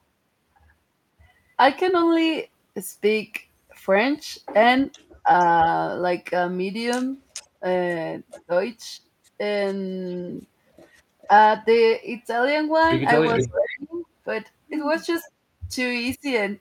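Speech suppressed in double talk at 5.23 to 5.29 s: the speech dips briefly by about 15 dB, likely because an echo canceller could not separate this talker from loudspeaker echo during overlapping talk and turned both down.

Echo leak at 7.33 to 8.43 s: a copy of the speech returns 427 ms late, about 15 dB below the direct sound. This is likely a loudspeaker-side echo canceller letting part of its microphone pickup through. Over the same stretch, speech suppressed in double talk, from 7.61 to 8.5 s, pulls the speech down in short pieces by up to about 20 dB.

Echo leak again at 11.21 to 11.27 s, as a faint scrap about 30 dB down at 450 ms delay. At 13.33 to 13.98 s it comes back strong, only about 5 dB below the speech, also 450 ms late. Overlapping this, speech suppressed in double talk from 13.38 to 14.08 s cuts the speech by up to about 25 dB for most of that span.

Speech suppressed in double talk at 15.23 to 16.25 s: short dropouts of up to about 25 dB chop the speech in brief fragments.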